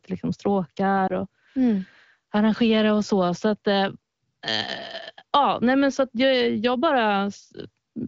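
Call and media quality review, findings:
Lost AMR speech frames, 1.07–1.12 s: one corrupted frame, likely about 20 ms, concealed from prior pitch and tract settings at lowered gain; brief dip before "och mm arrangera och".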